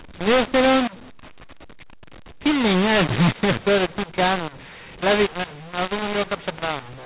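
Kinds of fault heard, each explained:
mu-law and A-law mixed up: The speech sounds harsh and gritty for the whole clip, with loudness jumping unevenly and pauses filled with noise. The mu-law coded samples are decoded as A-law, which scrambles levels and lifts near-silent samples.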